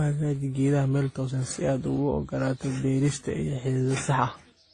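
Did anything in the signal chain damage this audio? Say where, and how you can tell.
Yes, at the codec stage, throughout the speech: this is transcoding between lossy codecs. Nothing sounds above about 9.8 kHz, and the band carries layered, mismatched artefacts from different codecs heard together. The likely chain is AAC-LC, then WMA, then Opus, each near 32 kbit/s, with every encoder wasting bits on the previous one's damage while adding its own. A single low-bitrate encode would produce one codec's artefacts, not several codecs' stacked together.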